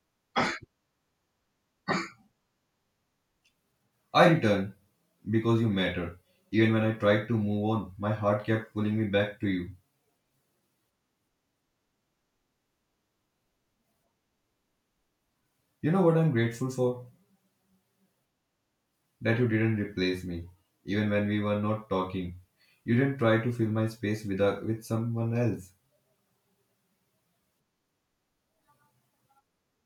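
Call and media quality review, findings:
No findings for this call and media quality review: nothing in the speech audio needs attention.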